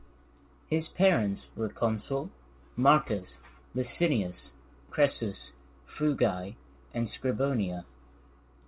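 No faults in this speech: the band stops at 4 kHz, as expected from a narrowband call path, which fits G.711 mu-law coding at 64 kbps.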